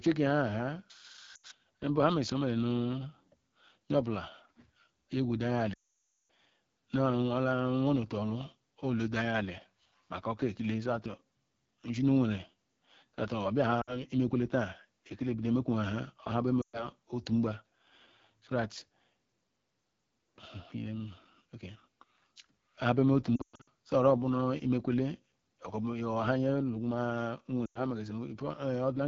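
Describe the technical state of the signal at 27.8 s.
At 27.8 s the sound sits at the end of a run of lost AMR speech frames, spanning 27.65 to 27.80 s. Frames failed their checksum, so the decoder repeated the last pitch and vocal tract settings at falling gain. The sound fades quickly to near silence, with a brief rough recovery. The smooth decay, rather than a hard cut, sets it apart from a plain dropout. The length fits about five lost frames.

Throughout, including this moment, the AMR wideband (HD Voice) codec at 8.85 kbit/s leaves a plainly audible raspy roughness. The band above 6.4 kHz is noise-filled rather than true detail, unlike the muffled, band-limited sound of a narrowband codec.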